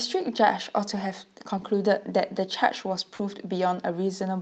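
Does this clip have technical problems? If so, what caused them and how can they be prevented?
Yes, two kinds of network fault affect this speech.

Lost packets rebuilt from error correction occur at 1.57 to 1.63 s and again at 3.19 to 3.21 s. The first span is about 40 ms long, which fits two 20 ms packets. The second is about 20 ms, which fits one packet. In each case the next packet carried a low-bitrate backup copy, and the decoder played that copy instead, so nothing drops out. The rebuilt stretch sounds rougher and noisier. A spectrogram shows no gap there, only smeared, grainier harmonics and a raised noise floor between them. A larger jitter buffer and fewer lost packets on the network would prevent this.

Short concealed packet loss runs from 3.15 to 3.21 s, about 40 ms of audio that never arrived in time. The receiver filled the hole by extending the preceding sound, following its pitch where it was voiced and using shaped noise where it was not, then faded back into the real signal. 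The last part of this span overlaps the second error-corrected packet. It is heard as a brief smear or wobble. A spectrogram shows harmonics stretched flat and unnaturally steady, and a waveform shows a repeated, decaying pattern. A more stable connection, or enabling forward error correction with enough redundancy, would prevent it.

Throughout the clip the Opus call path leaves a clean spectral ceiling at 8 kHz.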